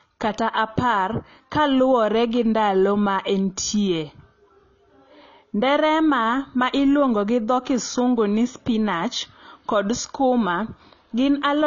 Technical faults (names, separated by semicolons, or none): AAC compression